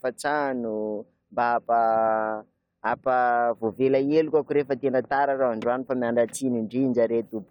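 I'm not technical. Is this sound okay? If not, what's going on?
Yes, no faults can be heard in this recording.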